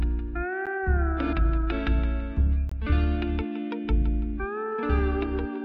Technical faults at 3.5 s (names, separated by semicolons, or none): none